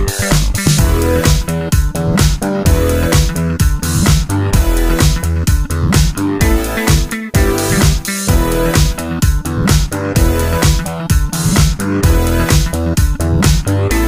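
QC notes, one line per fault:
No technical faults are audible anywhere in the audio, and the signal holds steady throughout.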